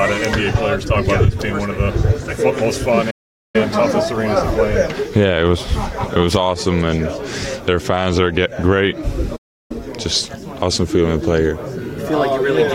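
Playback stalls at 3.10–3.56 s and 9.36–9.71 s cut the sound to silence for about 0.43 and 0.34 s, likely from a starved or blocked player. These are far longer than a brief dropout.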